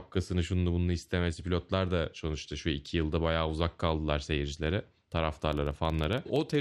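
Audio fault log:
5.53–6.61 s, filter restarted on every block: its state resets at each block start, so a tick repeats as a 21.5 Hz buzz, fitting 2048-sample blocks.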